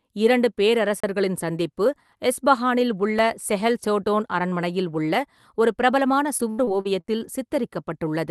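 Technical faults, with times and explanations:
1.00–1.04 s, 3.19 s and 7.08 s, block of digital silence: the output drops to silence and returns with no fade. The first hole lasts 32 ms and falls just before "சந்திப்பு எஸ்ஃபஹானில் உள்ள செஹெல்", so it is heard as a short gap. The 2 ms hole between "சந்திப்பு எஸ்ஃபஹானில் உள்ள" and "செஹெல் சோடோன் அரண்மனையில் உள்ள" and the 7 ms hole register as clicks, not gaps. Unlike concealed loss, nothing fills these holes. They are hard dropouts, most likely because the output buffer was not filled in time.
6.25–7.20 s, repeated packet loss (robotic sound): just after "சோடோன் அரண்மனையில் உள்ள ஒரு", five holes arrive close together. The longest is 74 ms, and they cover about a fifth of the stretch. The receiver patches each hole by extending the last sound it received, and only part of the missing audio is rebuilt well. This gives the speech a choppy, robotic texture. 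It differs from the silence blocks because the gaps are smeared over with stretched sound and do not drop to silence.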